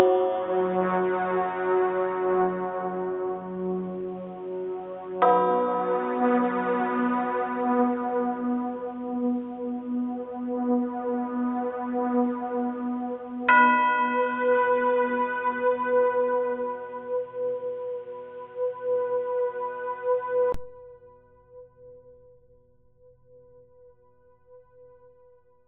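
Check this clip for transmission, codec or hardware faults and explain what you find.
One fault is present. From 0.0 to 20.54 s, an input switched to a poorer device, likely a narrowband microphone, dulls the sound: nothing above 3.8 kHz, level about 5 dB lower, and background noise about 35 dB down. A 20 ms silence at the switch marks where the sound clears.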